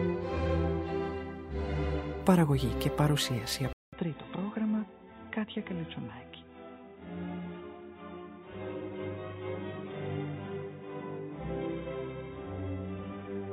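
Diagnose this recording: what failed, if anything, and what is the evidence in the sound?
At the driver or device level, the input was likely switched to a poorer device at 3.73 s, holding to the end. The capture drops out for 200 ms there, then returns from different hardware: nothing above 3.8 kHz survives, so the sound turns dull and boxy, the level falls by roughly 10 dB, and a new background noise floor sits around 40 dB under the signal. These are the narrower band, lower gain and own background noise of the replacement input.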